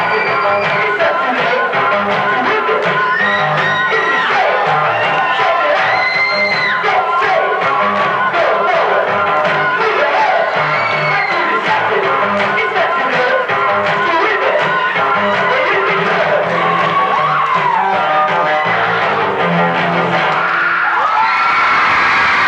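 No technical faults can be heard anywhere here.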